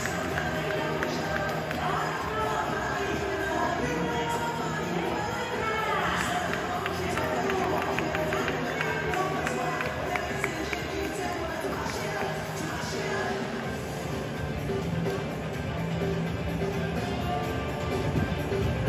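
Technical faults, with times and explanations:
No technical faults detected.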